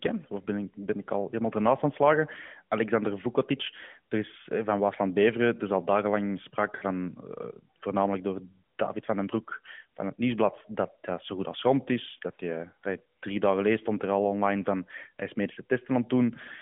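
Lost AMR speech frames occur at 6.76 to 6.84 s. Radio errors corrupted a short run of frames so they failed their checksum, and the AMR decoder filled the gap by repeating the last good pitch and vocal tract settings while lowering the gain. The speech briefly smears into a drawn-out, fading warble, then returns weak or rough for a moment. The concealed stretch fits about three 20 ms frames. Around it, the AMR narrowband codec's telephone band of 150 Hz to 3.4 kHz is audible.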